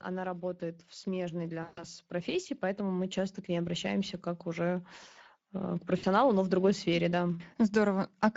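Throughout, the Speex codec leaves the speech hoarse and noisy, with a hissy, shaped fill replacing real detail above 4 kHz, which fits a middle quality setting near 17 kbps. The damage is grainy rather than warbly or smeared.

From 0.05 to 4.94 s, automatic gain rising lifts the level by about 9 dB. Voice and background swell together slowly until "э к", unlike a sudden volume step.

From 1.63 to 1.84 s, VoIP packet loss concealed by the speech codec covers about 140 ms of missing audio. The sound stretches into a fading buzzy tone or coloured noise instead of a clean dropout to silence, and the voice stays weak briefly afterwards.

From 5.97 to 6.05 s, between "э к" and "но в другой сфере", a shorter concealed loss of about 60 ms leaves a brief stretched, fading smear rather than a click or gap.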